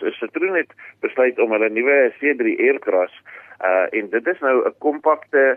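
No technical faults occur at any point in this clip, so there is nothing to describe in time order.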